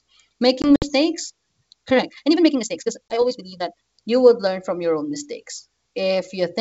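Speech with two kinds of fault. From 0.62 to 0.87 s, silent holes totalling 80 ms break up the sound, scattered over 200 ms with the longest gap 60 ms, and it comes back slightly distorted. A second, 20 ms hole at 3.09 to 3.15 s does the same. This is packet loss on an ADPCM call. A few packets, and later about one, were dropped, and the decoder's predictor and step size drifted from the sender's until they settled again. Between 1.72 and 3.94 s the pace jumps to about 1.9 times normal while the pitch stays put, sounding rushed. This is likely a time-stretched section, squeezed by software that drops short pieces to keep the pitch. The wideband telephone coding is clear up to 7 kHz, which fits G.722 at 64 kbit/s.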